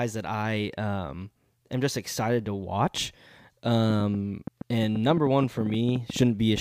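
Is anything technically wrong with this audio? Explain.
Yes. From 3.90 s to 6.58 s a train of clicks runs over the speech, about 20 in all at roughly 7.5 per second with uneven spacing, and they continue through the pauses. Each is a short pulse of near-identical shape, peaking a few dB above the speech, heard as a ticking patter. The cause is likely interference or a faulty connection injecting pulses. Unlike random crackle, the clicks share one shape and arrive as a sustained train.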